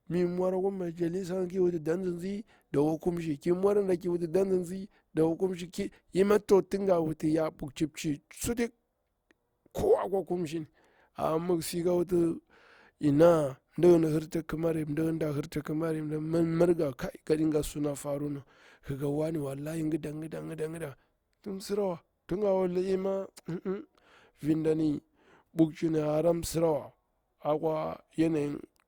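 At 15.63 s a sharp attack arrives softened, with a brief hiss of about 18 ms leading into it. This is pre-echo: the transform codec spread quantisation noise sized for the loud onset across its whole block, so the quiet moment beforehand filled with noise.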